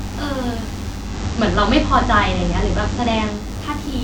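A DECT cordless phone buzz runs under the speech for the whole clip. A nearby handset or base station pulses every 10 ms, and the audio circuitry rectifies those radio bursts into a thin, harmonic-rich 100 Hz buzz sitting roughly 20 dB below the speech.

At 0.94 s the digital radio blends to analogue FM over about 0.29 s, returning to digital at 3.53 s. In between, the level shifts by about 3 dB, and FM hiss rises to roughly 30 dB below the speech.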